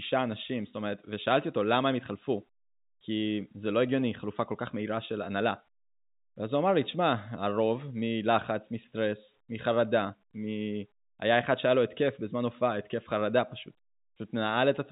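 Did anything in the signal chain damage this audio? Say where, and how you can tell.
No, nothing in the chain has damaged this speech beyond its telephone path, whose G.711 coding shows only its usual band limit, with nothing above about 3.8 kHz and at most a faint level-tracking quantisation hiss beneath the signal.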